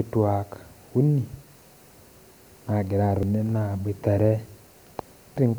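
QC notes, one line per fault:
3.23 s and 5.37 s: damaged data in a compressed stream. Each spot gives a brief chirp or blip in the speech. Corrupted bytes in the coded stream make the decoder misread those frames, lose sync and hunt for the next valid frame header.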